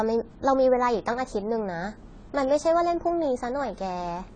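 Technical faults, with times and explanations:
Throughout, AAC compression: the speech was likely squeezed through a low-bitrate AAC-LC encoder, around 24 kbps by the sound, which discards everything above 9.6 kHz and coarsely quantises what remains, leaving the speech dull and smeared, with a warbling, fizzy texture on sibilants.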